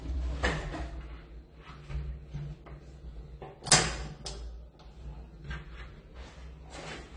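Low-bitrate audio saved at a high bitrate, throughout: nothing is present above about 10.2 kHz, and the top end sounds dull. This likely comes from an earlier low-bitrate encode, around 32 kbit/s, whose losses a later high-bitrate MP3 could not restore.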